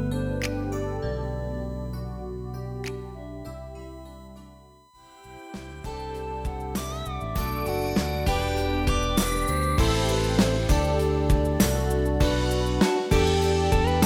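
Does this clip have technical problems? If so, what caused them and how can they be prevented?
Yes, there's USB whine the whole way through: a steady 1 kHz tone sitting roughly 30 dB under the sound. That pitch matches the bus's 1 ms frame timing leaking in through power or ground. A powered, isolated hub or a ground-loop isolator should sort it out.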